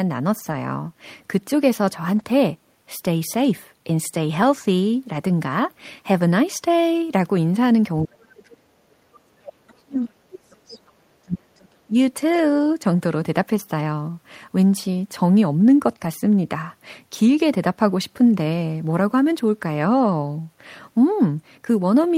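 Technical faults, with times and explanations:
0.39–0.53 s, 2.15–2.21 s, 5.13–5.15 s, 12.33–12.39 s, 13.55–13.61 s, 15.91–16.05 s, lost packet rebuilt from error correction: brief rough, noisy patches without gaps, 20 to 80 ms long, where the decoder played low-bitrate backup copies carried in the following packets.
2.23–2.27 s, short concealed packet loss: a quick smear of about 20 ms where missing audio was filled by extending the preceding sound, then blended back in.
8.05–11.61 s and 11.87–11.94 s, speech suppressed in double talk: the voice sinks sharply, by about 40 dB at worst for roughly three seconds, then briefly by about 15 dB. The likely cause is an echo canceller ducking both sides during overlapping talk.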